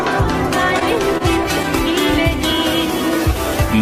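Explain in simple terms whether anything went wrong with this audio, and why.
Between about 0.79 and 1.67 s there's a run of scattered short gaps: roughly five tiny dropouts where bits of the audio stream arrived late or never arrived. Rather than leave silence, the player papered over each hole by stretching the sound that came just before it. None lasts longer than around 30 ms, and they cover only about 7% of that stretch, so what you hear is a few quick ticks, smears or hiccups.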